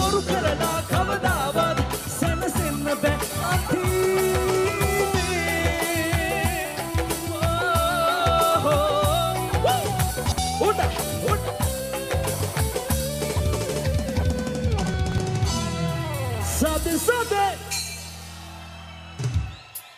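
You'll hear chunks out of order twice in this audio. At 10.26 to 10.38 s, one 60 ms chunk turns up one slot late, so two chunks swap places. At 14.94 to 15.18 s, a chunk lands three slots late and plays after the three that should follow it. Nothing goes missing, but each spot sounds briefly jumbled, with hard joins where mismatched chunks butt together.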